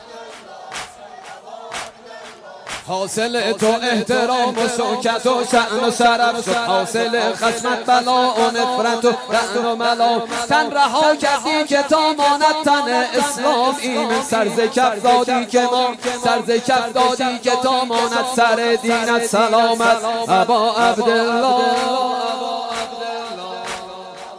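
No technical faults can be heard anywhere in the clip. There is nothing here that needs a timestamp or a closer listen.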